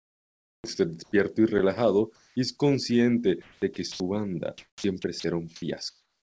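From 0 to 0.64 s the speech's background is replaced by comfort noise: a steady, featureless hiss about 4 dB quieter than the real room sound, which sits roughly 52 dB below the loudest speech. The likely cause is discontinuous transmission. The sender's voice detector heard no speech and stopped sending, and the receiver synthesised noise shaped like the background. The same swap recurs from 1.04 to 1.12 s, just before "y relajado y es", and from 2.16 to 2.36 s, between "y relajado" and "y es", each about 3 dB down. It appears again from 5.90 s to the end, about 4 dB down. Each pause loses the background's texture, and the level dips.

From 3.42 to 4.00 s the sound is chopped by the voice detector. The detector likely toggled between sending and muting several times, so about 0.3 s in total was filled with synthetic noise.

Sound is dropped by the voice detector from 4.58 to 4.84 s, where about 0.1 s of speech is lost. 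A second, shorter dropout at 5.20 s loses about 40 ms. In both, the detector likely mistook speech for background, so steady noise stands in until it retriggers. The call codec's band limit at 8 kHz applies throughout.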